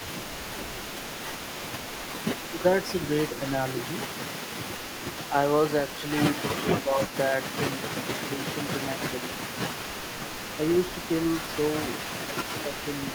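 From the start to the end at 13.1 s, a faint delayed copy of the speech trails about 235 ms behind, roughly 15 dB down: an echo leak, likely from a loudspeaker-side echo canceller letting residual echo through. At 2.5–2.64 s and 6.53–7.32 s the speech dips by a few dB for brief stretches, likely speech suppressed in double talk as the canceller turned its own talker down along with the echo.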